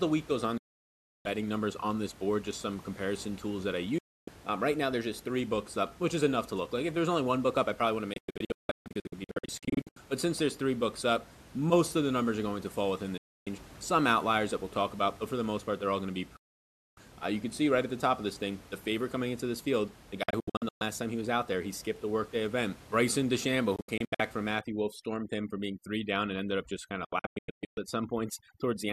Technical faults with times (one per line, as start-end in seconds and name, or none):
0.57-1.26 digital broadcast dropout
3.98-4.28 digital broadcast dropout
8.13-9.97 digital broadcast dropout
13.18-13.47 digital broadcast dropout
16.37-16.98 digital broadcast dropout
20.23-20.82 digital broadcast dropout
23.76-24.20 digital broadcast dropout
24.59-28.92 overdone noise removal
27.05-27.78 digital broadcast dropout